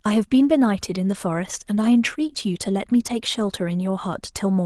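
No technical faults are audible.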